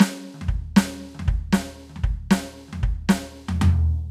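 Nothing in this music clip stood out as a technical fault on listening.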